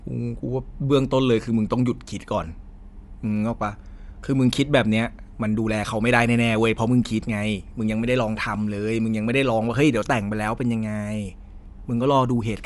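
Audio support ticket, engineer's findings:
Breathy, grainy edge on the speech across the whole recording, plainly audible. Top end hollow and hissy, band empty above about 11.6 kHz. Likely cause: Bluetooth LC3 compression. Transform codec dropping upper spectral detail and filling gaps with noise, cutoff fitting a reduced-bandwidth link mode. Artefact character consistent with 10 ms frames at a moderate bitrate, around 48 kbps.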